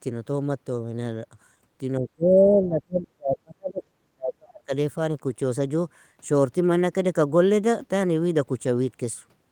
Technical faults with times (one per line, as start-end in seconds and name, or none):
1.99-4.72 speech suppressed in double talk